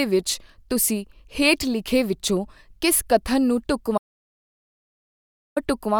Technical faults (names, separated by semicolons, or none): audio dropout to silence